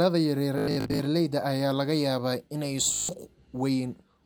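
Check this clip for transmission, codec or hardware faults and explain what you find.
The speech has two Bluetooth stutter faults. From 0.58 to 0.99 s, and again from 2.94 to 3.09 s, audio packets were dropped or arrived late. The receiver replayed its last short slice until fresh data arrived, so each stretch becomes a rapid, buzzy, machine-gun repetition. In the first stretch, about 280 ms goes missing in scattered bursts, the longest lasting 93 ms. The second loses 149 ms. Each time the speech resumes further on, as though it had kept playing underneath.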